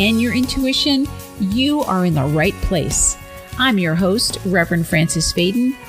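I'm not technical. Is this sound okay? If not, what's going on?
No. From 1.86 s to the end there is Wi-Fi interference. A Wi-Fi radio sitting close to the audio equipment sends out a short signal every 102.4 milliseconds, and the audio circuit picks it up as if it were sound. You hear this as a faint, steady ticking, about ten clicks a second, running quietly underneath the audio. Moving the Wi-Fi device farther from the audio equipment would stop it.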